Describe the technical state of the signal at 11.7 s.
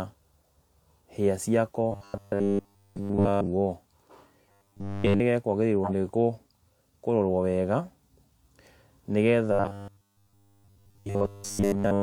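At 11.7 s the speech is caught in robotic sound from repeated short buffers. The fault runs from 9.52 s to 12.02 s. The voice has become a rigid, metallic buzz at 100 Hz. It still roughly tracks the words. Essentially all of the sound there is repetition. The likely cause is fresh audio arriving too slowly, so the same tiny slice keeps being replayed. A 100 Hz buzz fits a slice about 10 ms long.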